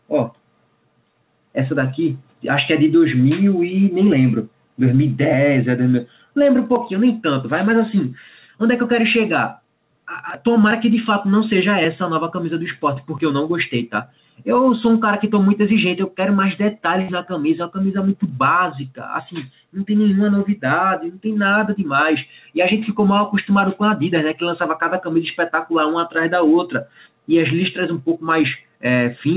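Gain pumping runs through the whole clip. The input gain is likely set far too high, so a fast limiter clamps down on every loud sound. The gain swings by roughly 5 dB, leaving the audio squashed and breathing.

From 15.22 s to the end, a feedback whistle appears. The loudspeaker-to-microphone loop is likely sitting just at the edge of feedback, so one frequency, 4 kHz, keeps ringing without running away. It is a thin, steady tone about 15 dB below the main sound, swelling and fading slowly in level. It lands right at the top of the narrow band that the call path carries, since nothing above 4 kHz gets through, which fits a G.711 telephone codec.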